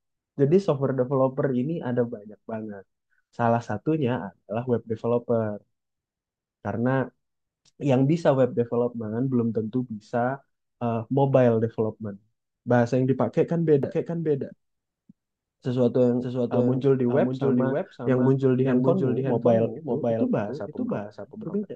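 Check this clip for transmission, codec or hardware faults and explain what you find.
One fault appears. From 13.83 s to the end, a doubled audio track: a second capture path or misaligned edit likely mixes in a copy about half a second late and a few decibels quieter, so the speech echoes without any room decay.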